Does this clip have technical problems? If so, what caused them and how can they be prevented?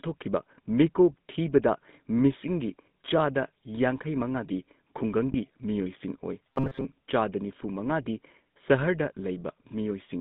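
Yes. Throughout, the speech has the buzzy, gravelly roughness of the GSM full-rate codec, squeezed into roughly 150 Hz to 3.7 kHz. That fits a 13 kbps GSM link, which models the vocal tract and drives it with sparse pulses, so fine detail is lost. Using a wideband codec such as AMR-WB or Opus would avoid this.

From 5.32 to 5.35 s there's a brief rough, metallic ring, consistent with a single lost GSM frame: the decoder reused the last good frame's settings to cover the gap. Better radio coverage or error protection on the link would prevent it.

From 6.50 to 6.85 s the speech turns into a rigid, metallic buzz at about 134 Hz that still loosely tracks the words, the robotic sound from repeated short buffers. The likely cause is late-arriving audio being covered by looping a buffer of about 7.5 ms while most of the real audio there is skipped. A larger jitter buffer or steadier delivery would stop it.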